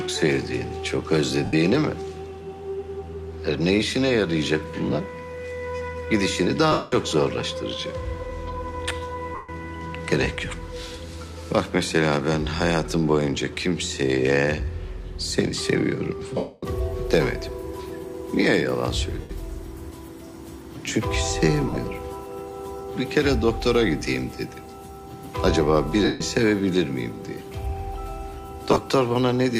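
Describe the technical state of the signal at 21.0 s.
At 21.0 s the signal is intact, with no audible fault at that point.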